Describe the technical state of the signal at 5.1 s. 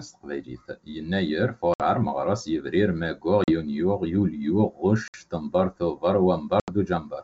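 A hard-edged silent hole runs from 5.08 to 5.15 s, and the speech comes back unsteady and slightly distorted before settling. This is packet loss on an ADPCM call: about 60 ms went missing, which fits roughly three lost packets, and the decoder's adaptive predictor and step size drifted out of step with the sender's until they realigned.

Underneath, the sound is hollow and phasey, with fixed notches beginning around 3 kHz. This is channel delay (comb filtering): one channel lags the other by a small fraction of a millisecond, and summing them to mono cancels their shared content at evenly spaced frequencies.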